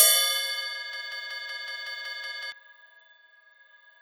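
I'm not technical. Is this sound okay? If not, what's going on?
No. From 0.93 to 2.52 s, a tiny 0.19-second piece stutters nine times in a row, a broken-record loop, likely from playback stalling and repeating its last fragment.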